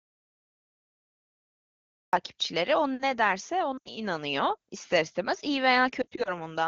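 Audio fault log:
0.00–2.13 s, audio dropout to silence: clip opens in silence with no room tone, flat waveform and blank spectrogram; likely a lost input feed.
3.78–3.88 s, lost AMR speech frames: an 80 ms run concealed by repeating pitch and tract settings with falling gain, so the speech drops to near silence within two frames; spectrogram shows harmonics that dim quickly.
6.01–6.30 s, lost AMR speech frames: 100 ms lost, scattered over 240 ms in runs up to 40 ms; brief dips and warbles, with notches in the waveform envelope and repeated spectral slices.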